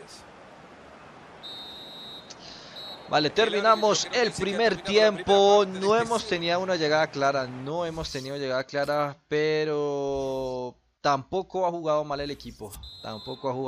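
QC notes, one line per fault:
Nothing stood out on listening to this audio.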